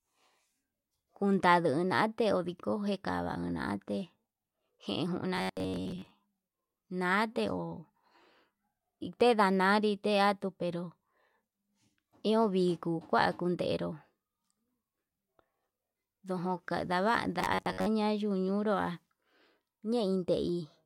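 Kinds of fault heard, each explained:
Robotic sound from repeated short buffers: at 5.36 to 6.13 s and again at 17.39 to 17.86 s, the speech turns into a stiff, metallic buzz pitched at 93.8 Hz. This is likely because audio arrived too slowly and a fragment of about 10.7 ms was looped to fill the gap, covering most of the first stretch and about half the second. A spectrogram shows rigid, evenly spaced harmonics at multiples of 93.8 Hz, and the waveform shows one short cycle copied repeatedly.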